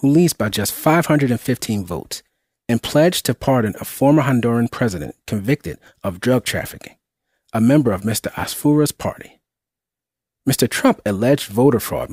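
No technical fault can be heard anywhere in this audio.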